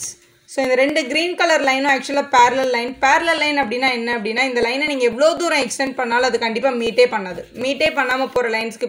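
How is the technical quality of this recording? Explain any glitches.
The recording has a steady tick running through nearly all of it. What you're hearing are periodic USB or driver dropouts, from about 0.15 s to 8.61 s, spaced every 0.25 s, so roughly four a second and around forty in total. Something is stalling the USB bus or audio driver on a fixed schedule, and each time about a millisecond of audio gets skipped outright. That splice comes across as a small regular pop.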